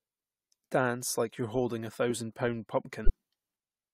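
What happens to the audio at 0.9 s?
Nothing goes wrong at 0.9 s; the speech plays through that moment intact, with no dropout, click or distortion.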